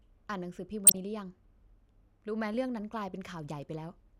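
From 0.85 to 0.98 s there's DAB burbling: weak-reception bit errors slip past correction into 8 frames, so wrong samples put short blips of noise into single sub-bands over the speech.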